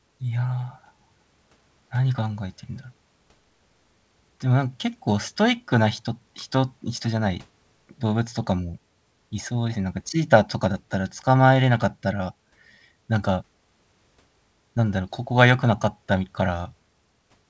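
No technical faults occur in the speech, which carries the ordinary character of a wideband call path with nothing above 8 kHz.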